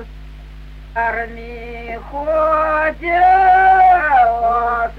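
Damaged data in a compressed stream hits this audio twice: corrupted bytes make the decoder misread frames and lose sync until it finds the next header, producing short glitches from 0.93 to 0.98 s and from 3.95 to 4.01 s.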